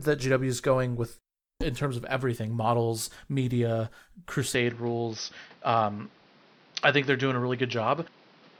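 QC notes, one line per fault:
4.55–8.60 s, input switched to a poorer device: recording likely moved to a narrower-band input mid-clip, so from 4.55 s nothing reaches past 6.1 kHz and the speech turns duller with no gap at the switch. Level holds steady while a new background noise appears roughly 30 dB below the speech.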